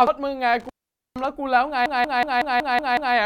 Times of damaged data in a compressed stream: 0.07

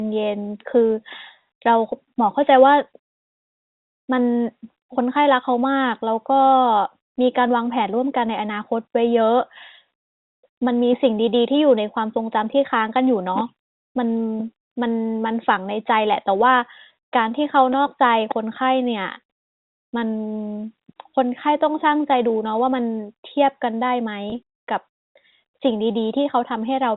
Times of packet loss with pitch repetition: 24.30-24.32

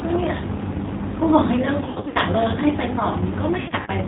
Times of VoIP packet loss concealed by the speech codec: 1.81-2.18, 3.61-3.90

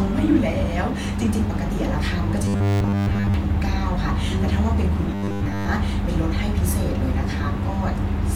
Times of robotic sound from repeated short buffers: 2.45-3.34, 5.15-5.67

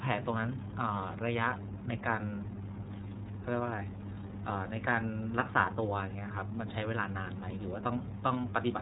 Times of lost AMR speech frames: none

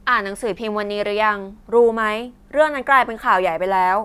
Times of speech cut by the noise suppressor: none

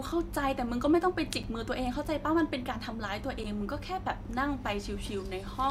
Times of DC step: none

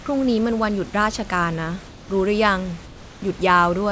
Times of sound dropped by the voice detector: 0.02-0.06

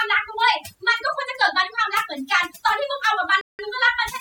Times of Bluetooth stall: 3.41-3.59

